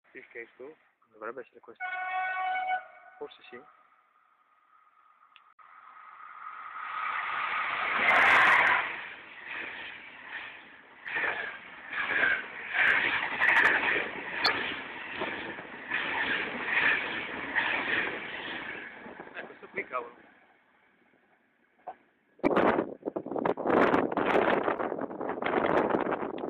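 Damaged data in a compressed stream hits at 5.50–5.60, 11.04–11.09, 14.44–14.48, 22.43–22.48 and 24.76–24.80 s. Corrupt bytes garble those frames. The decoder loses sync and hunts for the next valid header. Each spot sounds like a brief chirp or blip.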